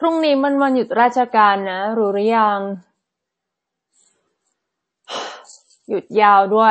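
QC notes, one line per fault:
Throughout, MP3 compression: likely a starved MP3 encode, consistent with roughly 32 kbps, that cut all treble above 8.4 kHz and let weak frequency lines switch on and off between frames, so the speech sounds plainly dull, watery and swirly.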